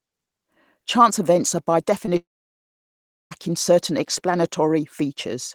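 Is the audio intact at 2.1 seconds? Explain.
No. A short concealed packet loss runs from 2.05 to 2.09 s. About 20 ms of audio never arrived, and the receiver patched the gap by extending the preceding sound for roughly 15 ms before blending back. The result is a brief smear or wobble.

Right after, from 2.17 to 3.33 s, the sound gives way to about 1.07 s of silence before returning with that stretch gone. This is likely a long network dropout, where the receiver briefly continued the last sound, then fell silent.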